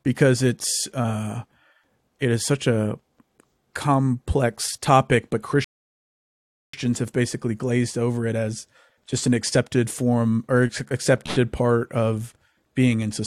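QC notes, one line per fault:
5.64–6.73 s, rebuffering stall. The speech halts right after "complex topic but" and the line goes silent for about 1.09 s. It then picks up cleanly with "have basically glazed over", with no words skipped or repeated. The player had used up all the audio it had downloaded, so it stopped and waited for more data. Playback continued from the same sample, which is why nothing is missing and only time is added.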